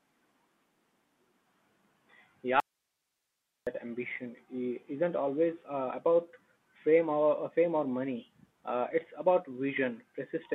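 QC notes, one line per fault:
throughout: Bluetooth CVSD headset codec; the speech is boxed into roughly 200 Hz to 3.4 kHz, with scratchy s sounds and granular hiss, consistent with a 64 kbps CVSD link.
2.60–3.67 s: audio dropout to a faint residue; the speech cuts abruptly to faint hiss for about 1.07 s, likely a lost link while the path stayed live.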